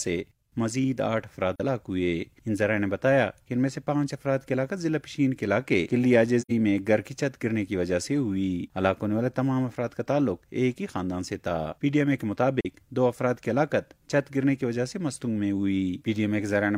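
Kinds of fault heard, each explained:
AAC frame loss with muting: at 1.56 s, 6.41 s and 12.60 s the sound drops into brief soft-edged holes of about 43 ms, 85 ms and 43 ms. The lengths fit one, two and one lost AAC frames. The decoder filled each missing frame's spectrum with zeros, so the sound gaps out. The overlapping transform windows then fade it down into the gap and back up afterwards, leaving a rounded dip rather than a hard cut.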